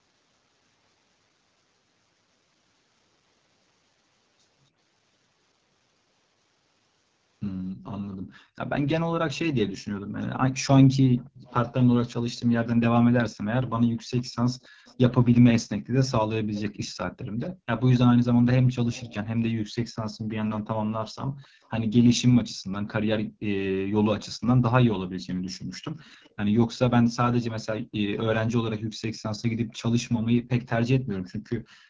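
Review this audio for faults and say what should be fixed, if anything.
Throughout, the speech passed through the AMR wideband (HD Voice) codec at one of its lowest modes, which fits 8.85 kbit/s. The result is a plainly audible rough, raspy texture.

From 7.83 to 31.3 s there is an echo leak. The far side's echo canceller likely failed to remove what its microphone picked up from the loudspeaker, so a faint copy of the speech returns about 272 ms late, roughly 25 dB below the main signal.

The background is gated by the echo canceller in two spans. From 8.17 to 10.16 s, the canceller sharply turns down the microphone while the loudspeaker plays, and the room sound dips by up to about 29 dB for roughly half a second in total. From 14.69 s to the end, it dips by up to about 40 dB for roughly two seconds in total.

To prevent these, the call should run at 12.65 kbit/s or higher, and the far end should use a headset or a better-tuned echo canceller that suppresses residual echo without hard-gating the microphone.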